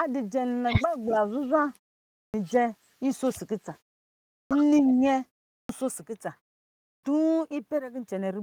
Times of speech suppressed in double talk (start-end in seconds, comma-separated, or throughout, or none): 1.06-1.17